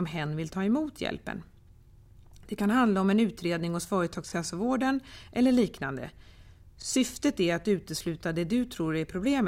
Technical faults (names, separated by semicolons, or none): overlapping chunks